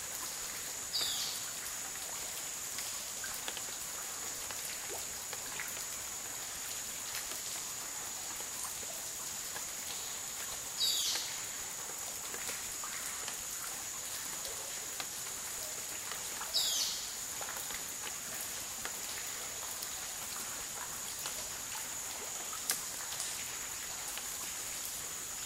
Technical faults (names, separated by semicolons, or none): none